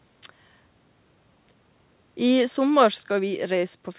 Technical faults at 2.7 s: automatic gain falling

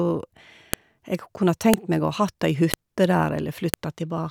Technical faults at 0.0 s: none

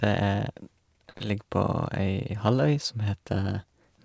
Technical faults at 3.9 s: none

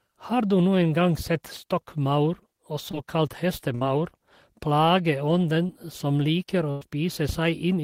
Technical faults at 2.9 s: short concealed packet loss

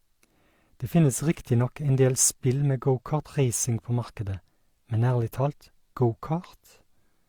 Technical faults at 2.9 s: none

